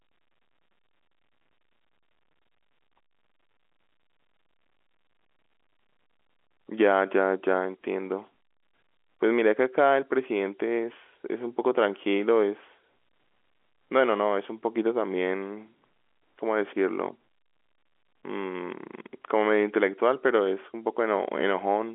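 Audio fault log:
19.22 s: packet loss with pitch repetition. About 20 ms of audio is missing, which fits a single lost packet on the G.711 A-law line. The receiver fills the gap by repeating the last pitch period, so the sound briefly holds on a slightly buzzy, sustained tone before it resumes.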